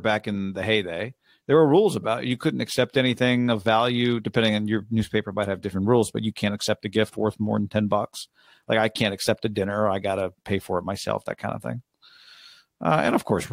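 No technical faults can be heard anywhere in the speech recording.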